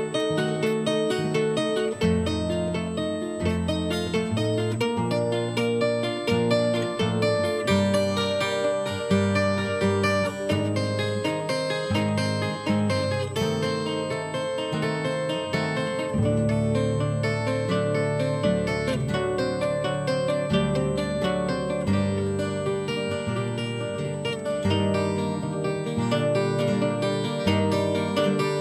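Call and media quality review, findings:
Steady high-pitched whine, fixed at 8 kHz, present the full length of the clip, sitting roughly 25 dB below the programme. USB whine. Probable component: USB interface or its power and ground path. Mechanism: the bus pulls current in 125 microsecond microframes, giving an 8 kHz repetition rate; that ripple leaks onto the supply or ground and into the analogue stage, where it is heard as a constant tone locked to the bus clock.

Brief slight dulling and loss of air at the very top of the spectrum, 12.03 to 13.34 s. Channel delay (comb filtering). Probable component: mixer or capture driver summing stereo to mono. Mechanism: one channel arrives about one sample late, some tens of microseconds, so summing cancels shared content at evenly spaced frequencies. With such a short offset, the first notch falls near 20 kHz, so the effect is subtle top-end thinning rather than obvious phasiness.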